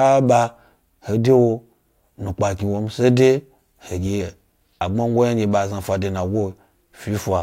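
Nothing in this recording stands out as a technical fault; the speech just runs along without any glitches to point to.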